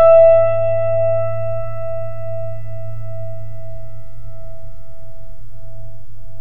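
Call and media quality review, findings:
DC offset, full clip, music. Waveform centred off zero by a constant of about -17 dBFS, so the trace sits visibly shifted and loses headroom on one side. Spectrogram: steady band pinned at 0 Hz. Probable component: capture or converter stage adding a fixed bias.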